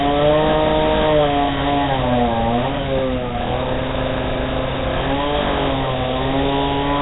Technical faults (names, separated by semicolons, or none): Nellymoser compression